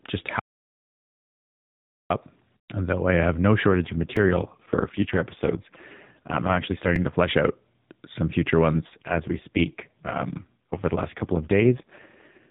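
From 0.40 to 2.10 s the speech falls into an audio dropout to silence: about 1.71 s of silence with no room tone underneath, and the speech breaks off and resumes mid-flow. The input was likely lost for that stretch while the recorder kept writing silence. A packet-loss gap or a quiet pause would still carry some noise floor; this is dead silence, and whatever was said in it is gone.

After "though I have no", at 3.68 s, an AMR rate drop sets in and lasts until 7.16 s, ending just before "out some future". The narrowband sound stays band-limited below 4 kHz as before, and nothing goes missing, but the voice turns buzzier and more synthetic, which points to the codec stepping down from 12.2 to about 4.75 kbps on a weak radio link. Unlike a dropout, there is no gap, only a loss of naturalness.

Inside that stretch, at 4.17 s and again at 6.96 s, a repeated buffer appears. A 2.9 ms slice plays three times in a row with hard joins, which fits a 128-sample buffer being replayed while new audio was late. 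At this size it sounds like a tiny click or buzz rather than an audible stutter, and it is too short to be mistaken for the codec's roughness.

The same AMR rate drop returns at 8.75 s, right after "out some future", and the degraded, synthetic quality continues to the end of the clip.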